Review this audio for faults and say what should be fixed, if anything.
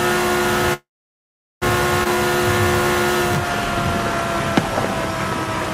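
From 0.73 s to 1.64 s the audio stops and is filled for about 0.9 s: a brief continuation of the last sound fades into roughly 0.78 s of silence, then playback resumes exactly where it left off, with nothing lost. This is a call audio freeze, likely caused by packets held up in transit so the jitter buffer ran dry and the receiver padded the wait. Unlike a skip, it inserts time rather than removing it. Preventing it means a larger or adaptive jitter buffer and a more stable network path.

At 2.04 s to 2.07 s playback skips ahead. About half a second of audio is missing, and the two sides are joined by only a tiny 17 ms bridge, so the sound lurches forward almost seamlessly. Here later audio was already waiting when a stretch was dropped, either in transit or when the buffer overflowed. Unlike a freeze, there is no audible pause, only absent material. Preventing it means letting the buffer drain gradually by time-scaling rather than discarding queued audio.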